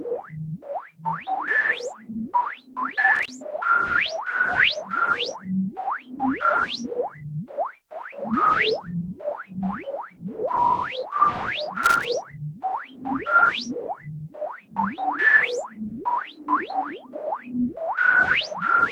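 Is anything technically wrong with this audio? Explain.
Yes, there are two bursts of loose connector crackle, at 3.15 to 3.29 s and 11.83 to 12.05 s. A worn or dirty contact repeatedly breaks and remakes the signal path, chopping the sound into an irregular, scratchy crackle.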